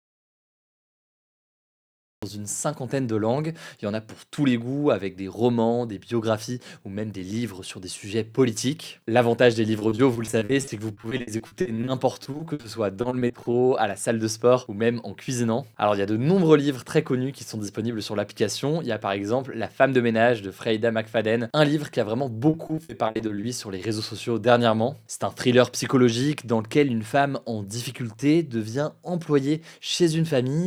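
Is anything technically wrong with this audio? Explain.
Yes, there are two kinds of fault. The clip opens in silence, with no room tone at all, already under way at the start and lasting until 2.23 s, when the sound abruptly comes in. This is an audio dropout to silence. The likely cause is that the input was lost before that point, through a disconnected device, a broken link or an accidental mute, while the recorder kept writing silence, so whatever happened then is gone.

Three stretches sound choppy, with a stuttering quality and small pieces missing: 9.79 to 12.65 s, 13.01 to 13.55 s, and 22.49 to 23.45 s. This is repeated packet loss. Packets went missing again and again, and each hole was patched by extending the preceding sound. The gaps run up to 60 ms, and roughly a quarter of each stretch is concealment, which is what breaks the sound up.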